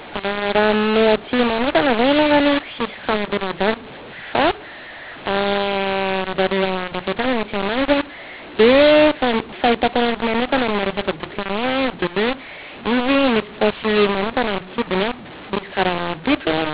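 From start to finish the speech carries a mu-law and A-law mix-up: samples encoded with the mu-law curve are expanded as A-law. The levels come out scrambled, so the speech sounds harsh and distorted and pauses fill with noise, all within the 4 kHz telephone band.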